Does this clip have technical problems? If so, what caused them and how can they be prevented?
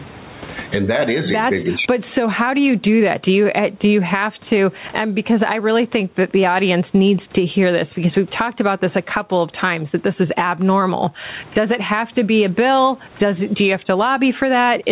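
Yes. There is gain pumping throughout the clip, likely from input gain set far too high while a fast limiter or compressor clamps down on each loud sound. The gain swings by around 20 dB, squashing the dynamics. Lowering the microphone gain and slowing the compressor or automatic gain control would prevent it.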